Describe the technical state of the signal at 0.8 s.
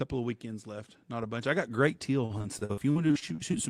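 At 0.8 s the speech signal is intact, with no audible fault at that point.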